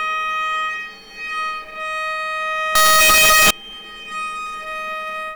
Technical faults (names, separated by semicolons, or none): signed and unsigned mixed up